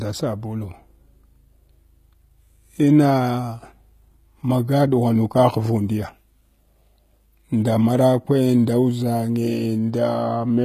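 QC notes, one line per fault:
Throughout: HE-AAC compression. The speech has clearly audible codec damage: s sounds come out gritty and lispy, and the treble has a bright but synthetic sheen, likely from HE-AAC at a bitrate around 20 kbps rebuilding the upper band by copying lower bands upward. On a spectrogram the top band looks like a smeared, blocky copy of the region below, with harmonics misaligned at the crossover and nothing at all above 14.9 kHz.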